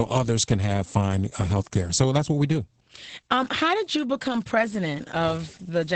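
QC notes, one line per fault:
Throughout: Opus voice compression, heavy. Nothing survives above 8.8 kHz, and the speech is muffled, hoarse and faintly robotic. The linear-prediction coder rebuilt the voice's excitation coarsely in 20 ms frames, which fits a wideband SILK stream at about 10 kbps.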